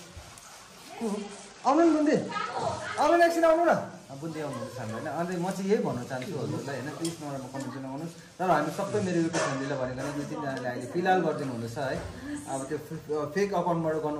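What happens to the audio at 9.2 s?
The treble dulls and a gritty noise rises from 8.86 to 9.98 s: a Bluetooth SBC bit pool drop starves upper sub-bands, consistent with roughly 88 kbps.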